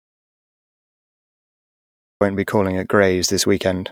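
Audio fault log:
0.00–2.21 s, audio dropout to silence: the speech opens in silence, no room tone, until "be calling at" cuts in, likely a lost input.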